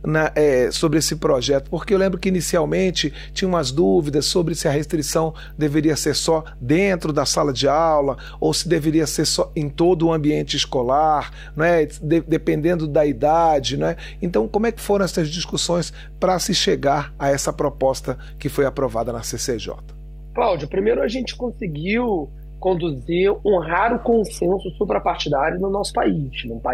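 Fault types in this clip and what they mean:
Mains hum, throughout: a steady low tone at 50 Hz sits under the audio from start to finish, roughly 15 dB below the programme level, as power-line current leaks into the signal path through a ground loop or stray coupling from a nearby transformer.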